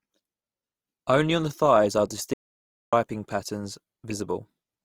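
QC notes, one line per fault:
throughout: Opus compression. The speech is rough and grainy, with a noisy texture laid over tones rather than the swirling, watery holes of MP3. Full bandwidth is kept, which fits Opus in its music mode at a low rate near 24 kbps. Starved bands are filled with noise instead of being left empty.
2.34 to 2.93 s: audio dropout to silence. Right after "on the thighs are" the sound cuts off for about 0.59 s of silence with no room tone, then resumes mid-flow. Unlike a pause or a noise-gated gap, nothing of the background survives. The likely cause is a lost input while the recorder kept writing silence.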